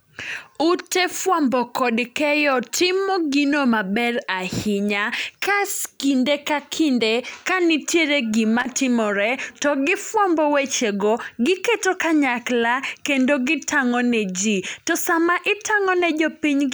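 A speech recording with a short burst of loose connector crackle from 8.60 to 8.65 s, where a worn contact briefly made and broke, chopping the signal into irregular scratchy clicks. On a waveform it shows as jagged spikes and dropouts; a spectrogram shows scattered broadband vertical streaks.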